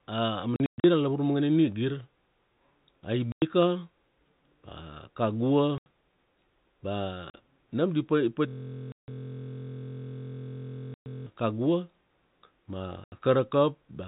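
Packet loss filled with silence cuts hard-edged gaps at 0.56–0.84 s, 3.32 s, 5.78 s and 7.30 s (just before "nam di"). They look like flat silent stretches on the waveform and blank columns on the spectrogram, with lengths in 20 ms steps.

From 8.48 to 11.26 s a system hang loop repeats a 23.2 ms slice, which fits a 1024-sample buffer, and produces a 43 Hz buzz. On the spectrogram it shows as identical repeating stripes. Further silent gaps cut into it at 8.92 and 10.94 s. One last gap follows at 13.04 s.

The 4 kHz ceiling of G.711 telephone coding is audible throughout.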